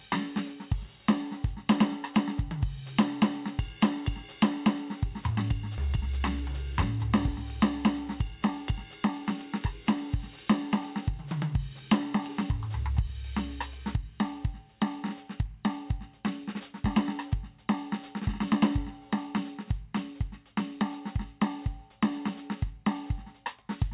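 At 5.78 to 5.80 s the music jumps forward in a skip ahead: about a second of audio is missing, and the two sides are joined directly with no gap filled. From 5.87 to 7.28 s a jitter buffer speed-up follows as the receiver trims the built-up delay, cutting short pitch-period pieces so the music runs 10% fast at unchanged pitch. About 150 ms is removed, and the tempo briefly rushes. Throughout, the G.711 A-law call path holds everything below 4 kHz.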